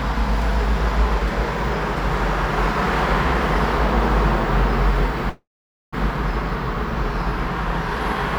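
At 5.29 s a call audio freeze begins, lasting until 5.94 s. The sound stretches into a fading buzz, then about 470 ms of near-silence. Packets were likely delayed, emptying the jitter buffer. Playback resumes where it stopped, nothing lost.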